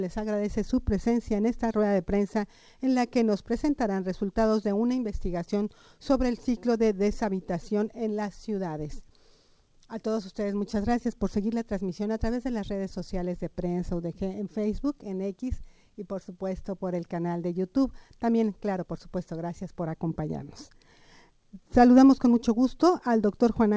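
No faults are audible; the sound arrives over a call path with nothing above 8 kHz, which fits a wideband codec such as G.722 at 64 kbps.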